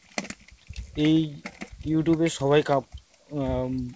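No technical faults can be heard in this clip.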